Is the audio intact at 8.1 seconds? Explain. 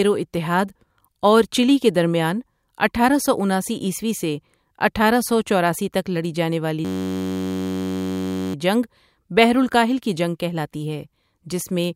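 No. A system hang loop runs from 6.85 to 8.54 s, between "تک لڑی جانے والی" and "جنگ بحر الکاہل کی". The computer or driver stalled while the sound hardware kept replaying the same short ring buffer. Each pass lasts 10.67 ms, which fits a 512-sample buffer. Repeating that slice at 93.8 Hz turns the speech into a steady, low buzz. When playback resumes, essentially nothing of the speech is missing.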